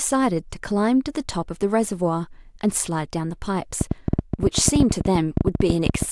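From 3.81 s to 6.03 s a train of clicks runs over the speech: roughly thirty similar pulses, averaging 11.8 per second but unevenly spaced, sitting well above the speech level. They tick audibly through the pauses too, likely from electrical interference or a faulty connection or power supply.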